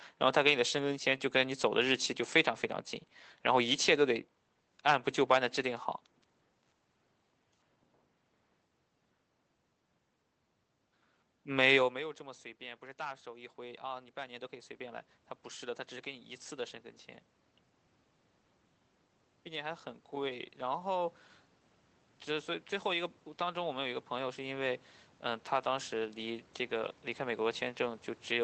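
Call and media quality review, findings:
Automatic gain rising, 12.2–16.81 s and 19.47–28.06 s. Input drops about 18 dB when the talker moves near 11.5 s. AGC in the capture path compensates slowly, adding about 6 dB, then about 9 dB. Voice and room noise swell together.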